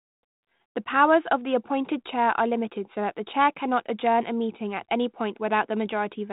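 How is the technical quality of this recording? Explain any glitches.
The technical quality holds up, and there are no glitches in this recording to explain.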